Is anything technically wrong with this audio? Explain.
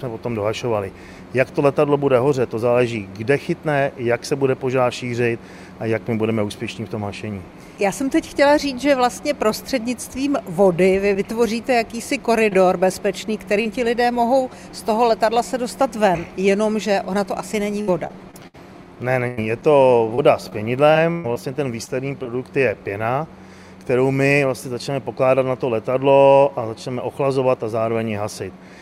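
Yes. Several stretches of network packet loss were patched over by the receiver, in three forms.

Short concealed packet loss occurs at 12.49–12.53 s and 13.61–13.67 s, with about 20 ms and 40 ms missing. Each time, the decoder lacked data and extended the preceding sound, then blended back into the real signal. It comes across as a brief smear or wobble. Unlike a plain dropout, there is no silent hole, because the gap is filled rather than muted.

Repeated packet loss (robotic sound) affects 17.81–18.56 s and 20.15–22.27 s. The first stretch has four gaps totalling 160 ms, the longest 66 ms, so about 22% of that span is synthetic fill. The second has seven gaps totalling 240 ms, the longest 127 ms. Because each patch is followed soon after by another, the audio turns choppy, with pieces missing. That clustering distinguishes it from the isolated short losses.

A burst of packet loss hits at 19.28–19.39 s, with about 100 ms lost in one run. 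The receiver kept extending the last sound while lowering its level, so it becomes a held buzz or fading hiss before the real audio resumes further along. That longer, decaying fill in a single event separates it from both the brief smears and the stuttering robotic stretches.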